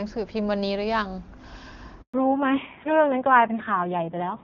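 Up to about 2.02 s the speech is wideband and clean, which fits AMR-WB HD Voice running near its top rate. At 2.02 s there's a handover gap. The call was being passed from one network to another, and for 120 ms, until 2.14 s, no speech frames got through. The voice fades out almost instantly and drops to dead silence. Whatever was said in that window is simply gone.

When the sound comes back at 2.14 s, there's a fallback to narrowband that lasts right to the end. The new link didn't pick up HD Voice again and settled on the old narrowband AMR codec instead. The rasp suggests it's running at one of its lower rates, around 5.9 kbit/s. Everything above 4 kHz is cut off, so the sibilants and air vanish. The speech sounds muffled, boxy and a bit gritty next to the first half.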